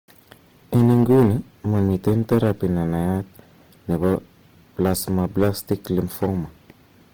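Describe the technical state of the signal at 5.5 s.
At 5.5 s the signal is being driven about 7 dB past what a stage in the chain can pass, so its peaks are sliced flat. This hard clipping runs from 4.81 s to 6.26 s, and the squared-off tops add harmonics high up the spectrum, giving a harsh fuzz on the louder parts of the speech.

Beneath that, and across the whole clip, the speech carries the grainy, rough texture of likely Opus compression in its music (CELT) mode. The full bandwidth is kept, reaching about 20.2 kHz, but band energies are refilled with folded or noisy content, which fits a low bitrate of around 16 kbps.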